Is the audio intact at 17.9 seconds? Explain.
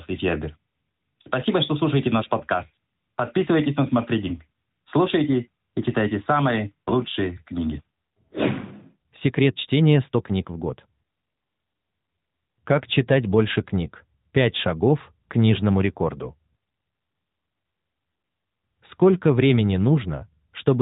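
Yes, the audio is intact at 17.9 seconds, with no dropout, glitch or other fault at that moment.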